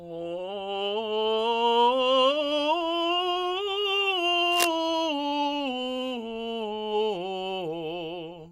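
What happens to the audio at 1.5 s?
Nothing goes wrong at 1.5 s; the music plays through that moment intact, with no dropout, click or distortion.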